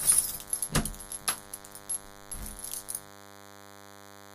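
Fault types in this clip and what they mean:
DECT cordless phone buzz: a nearby DECT handset or base station transmits a brief radio burst every 10 ms, and something in the audio chain rectifies that energy into the signal. Here it shows as a steady, thin buzz at a 100 Hz repetition rate with a dense stack of harmonics, present from start to finish underneath the sound. It sits roughly 20 dB below the wanted audio.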